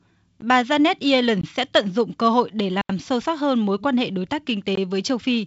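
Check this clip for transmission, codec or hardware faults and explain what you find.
There's one kind of fault: four blocks of digital silence. They fall at 0.41 s, 1.41–1.43 s just before "sẽ tận dụng cơ", 2.81–2.89 s between "dụng cơ hội để" and "sâu sắc hơn mối", and 4.75–4.77 s right after "quan hệ đối tác". The output buffer likely wasn't filled in time, so the sound cut out and back with no fade. The 13.6 ms one sounds like a tick, and the 80 ms gap is an audible hole. The sound is band-limited at 7.7 kHz, which fits G.722 wideband coding at 56 kbit/s.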